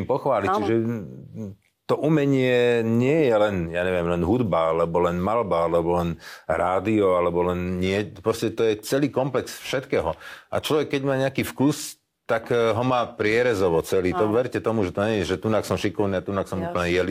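Periodic clock jitter starts at 7.67 s and runs to the end of the clip at 17.11 s. The converter's sample clock is being pushed back and forth at a steady rate of around 2 kHz, so every frequency in the speech gains sidebands spaced about 2 kHz above and below it. These are strongest around the higher-frequency content, giving the speech a rough, metallic edge that drops away in the pauses.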